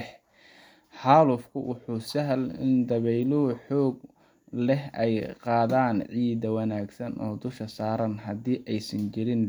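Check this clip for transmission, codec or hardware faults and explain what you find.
No faults detected.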